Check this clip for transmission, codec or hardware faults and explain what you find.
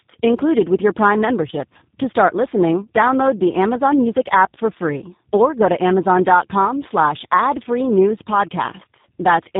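One fault runs through the whole recording: tandem speech coding. The speech passed through two low-rate speech coders in sequence, GSM full rate at 13 kbit/s and then G.729A at 8 kbit/s, with a G.711 A-law link between them. Each coder re-encodes the previous one's artefacts. The speech sounds rough, muffled and warbly, with nothing above 3.7 kHz. It is harsher than a single 8 kbit/s codec would sound on its own.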